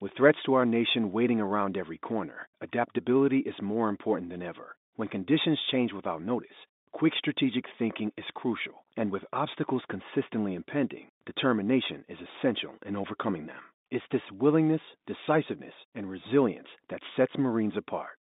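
No technical faults are audible anywhere in this recording.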